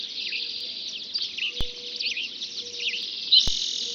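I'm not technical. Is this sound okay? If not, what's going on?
No, there are two kinds of glitch in it. First, a block of digital silence at 0.60 s and again at 3.03 s: the audio briefly drops to nothing, for about 2.7 ms and then 1.3 ms, which fits blocks of 128 and 64 samples not arriving in time. Each one is too short to hear as a gap and comes across as a tiny tick.

Second, a DC step at 1.61 s and at 3.48 s: the waveform's resting level suddenly jumps, then drifts back to normal. You hear a low thump each time while the sound carries on as before.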